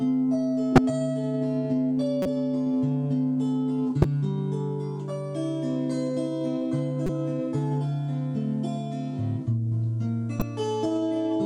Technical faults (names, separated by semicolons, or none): corrupt frame decoded